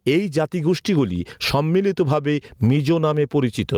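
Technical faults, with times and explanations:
Throughout, gain pumping: loud and soft parts are pulled closer in level and the speech sounds squashed, a swing of roughly 20 dB, likely from a fast limiter fighting overcranked mic gain.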